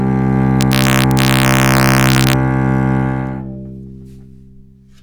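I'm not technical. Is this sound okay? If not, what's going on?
No. From about 0.61 to 2.33 seconds, the louder moments break into harsh, violent cracks, far sharper than ordinary distortion. This is integer overflow: the level ran slightly past the largest number the system can hold and wrapped around to the opposite extreme instead of being capped.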